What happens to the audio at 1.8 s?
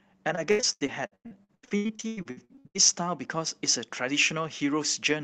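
At 1.8 s the speech falls inside a run of repeated packet loss (robotic sound), from 0.35 to 2.77 s. Gaps up to 93 ms are patched by extending the last sound, giving choppy speech with pieces missing. A spectrogram shows smeared, repeated harmonic blocks between breaks.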